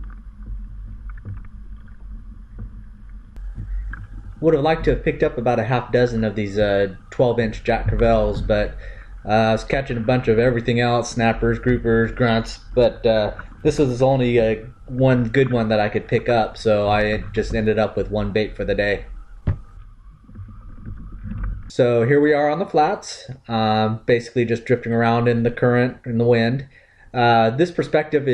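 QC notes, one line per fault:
Nothing to flag here, the whole clip sounds fine to my ears.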